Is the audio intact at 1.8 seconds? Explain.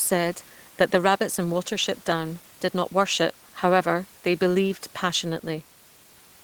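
Yes, the audio is intact at 1.8 seconds: the speech carries on unbroken there, with only the room's own background noise sitting about 31 dB below it.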